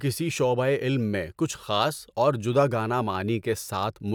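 Nothing stood out on listening to this speech recording.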